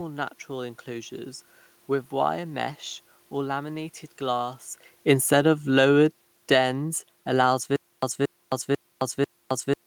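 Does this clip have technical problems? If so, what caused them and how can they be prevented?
Yes. Right after "wire mesh or laminated", from 4.21 s to 6.68 s, the speech and the background sink together by about 5 dB. That shared drop is the sign of automatic gain falling: the gain control judged the input too loud or its background noise too strong, and eased its gain down over those two and a half seconds. A shift near 4.5 s comes from the talker moving, not from the system. To prevent it, disable the automatic gain control and set a fixed input level with enough headroom.

From 7.76 s to the end, a fragment of about 229 ms repeats, each time followed by about 265 ms of digital silence, so a burst returns every 494 ms. This is a stutter with silent gaps. The likely cause is a playback or stream stall: each retry replayed the last buffered piece and then ran dry, and the audio that should have filled that stretch was lost. 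To prevent it, give the player a larger buffer and a steadier connection or faster source.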